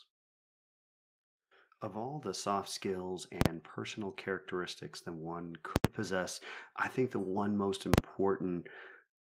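From 1.93 to 3.13 s, automatic gain rising lifts the level by about 4 dB as the gain control judges the input too quiet. Voice and background swell together over that second, which separates it from a speaker simply talking louder.

Invalid numbers at full scale then strike three times: at 3.41 s just before "personal characteristics that one" (43 ms), at 5.76 s between "personal characteristics that one" and "possess I think the" (85 ms), and at 7.94 s after "think the one most" (43 ms). A calculation produced infinite or invalid values that were pinned to the largest positive or negative value for a whole processing block. The 43 ms blocks, which fit 2048 samples, land as single harsh bangs. The 85 ms one shows a pop at each edge with nothing between. Unlike a click or dropout, each event is a flat slab at one extreme value, exactly one block long.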